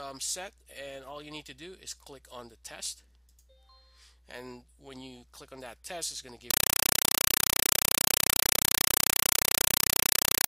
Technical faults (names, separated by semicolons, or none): compressed stream played as audio